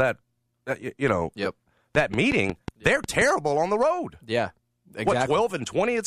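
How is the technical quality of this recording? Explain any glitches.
The recording has one clear glitch, a train of clicks. From 1.95 to 3.22 s, between "you you know yep" and "on the road", a steady ticking of about seven sharp, near-identical pops runs at 5.5 per second, standing roughly 10 dB above the speech. Such an evenly paced pulse most likely comes from electrical interference or a faulty connection or power supply.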